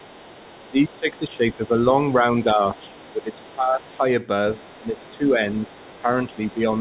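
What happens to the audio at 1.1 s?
At 1.1 s you're right in the middle of speech suppressed in double talk, which runs from about 0.7 to 1.81 s. The talker's speech dips by as much as about 20 dB for roughly a second in total. It sounds like the line briefly ducks out. The likely cause is that both sides were talking at once, so the echo canceller couldn't tell its own talker from the loudspeaker echo and turned everything down together.

Underneath that, there's the other side's voice leaking through, present from start to finish, including at 1.1 s. It sits at about 25 dB below the main speech, so it comes across as a faint second voice in the background. That's likely a loudspeaker feeding back into the microphone, with the echo canceller not removing all of it. All of this is heard through a narrowband call path that has nothing above 4 kHz.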